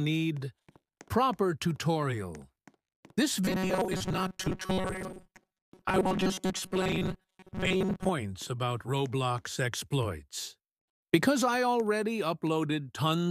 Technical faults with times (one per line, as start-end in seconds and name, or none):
3.45-8.10 robotic sound from repeated short buffers